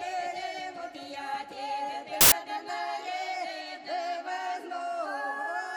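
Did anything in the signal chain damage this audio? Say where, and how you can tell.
Yes. At the sample-format conversion stage, samples were built from the wrong bytes from 2.21 to 2.32 s. Misassembled bytes push each sample's fast-changing low bits into the high-value positions, so those 110 ms turn into a burst of loud, harsh broadband noise.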